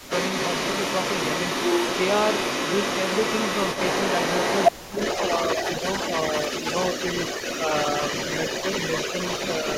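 Right at the start, from 0.0 to 0.1 s, the speech drops sharply, a deep dip for about a tenth of a second. That's speech suppressed in double talk, likely the echo canceller ducking everything while both ends were active at once. Running the whole clip there's an echo leak: a copy of the speech trailing about 303 ms behind, roughly as loud as the original, likely a loudspeaker's output reaching the far microphone and not being fully cancelled. Then at 4.82 to 4.95 s the speech gets squashed again, a similarly deep dip lasting around 150 ms, the same double-talk suppression.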